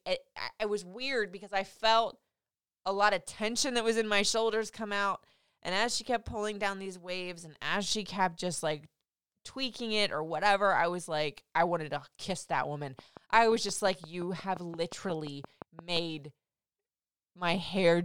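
At 12.99 s, right after "to kiss that woman", a train of clicks begins and runs until 15.98 s. Regular pops arrive about 5.7 times per second, roughly twenty in all. They sit a little above the speech level and keep ticking through the gaps between phrases. The likely cause is interference from nearby equipment or a faulty connection or power supply injecting near-identical pulses. A waveform shows evenly spaced sharp spikes, and a spectrogram shows thin vertical broadband lines.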